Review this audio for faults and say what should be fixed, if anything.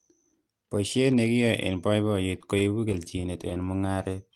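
From 2.41 to 3.69 s the speech catches and drags in a rapid stutter, fifteen brief hitches with none longer than 22 ms. These are repeated stalls (stutter): packets reached the receiver late or more slowly than playback consumed them, so the jitter buffer kept running dry. Each time, the receiver stretched the last sound to bridge the gap, about 182 ms in all, roughly a seventh of that stretch, with nothing actually lost. A deeper or adaptive jitter buffer, plus a steadier network path, would prevent it.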